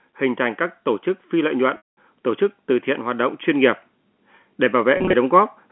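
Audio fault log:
0.05–3.8 s, automatic gain rising: the level climbs smoothly by about 4 dB over nearly four seconds as the gain control, judging the input too quiet, raises its gain step by step. The room background swells at exactly the same rate as the speech, which separates this from a talker moving closer or speaking louder. In that case the voice would rise while the background noise stayed put.
1.77–1.85 s and 4.97–5.13 s, packet loss with pitch repetition: at 1.77 s a lost stretch of about 200 ms is patched by replaying the last pitch cycle, giving a brief held, buzzy tone that decays before speech cross-fades back in. At 4.97 s about 110 ms goes missing in scattered pieces over 160 ms, none longer than 30 ms, so the sound stutters with short buzzy holds rather than one gap. The repeated, tonal fill distinguishes this from a plain dropout to silence.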